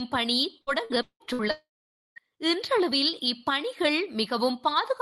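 A short speech recording turns choppy between 0.61 and 1.42 s, with pieces of the voice dropping out and being replaced by a robotic smear. This is repeated packet loss: six separate gaps, the longest about 176 ms, were each patched by stretching the last received sound, so nearly half of that span (about 44%) is synthetic fill rather than real audio, adding up to roughly 350 ms. Right after, from 1.51 to 2.30 s, the sound collapses into a brief fading buzz or hiss and then about half a second of silence before the speech picks up again further along, with the intervening material simply gone. That points to a likely long network dropout, where about 660 ms of audio never arrived and the receiver could only extend the last sound briefly before falling silent.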